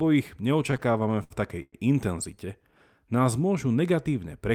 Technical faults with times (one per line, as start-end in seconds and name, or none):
0.71-1.75 repeated stalls (stutter)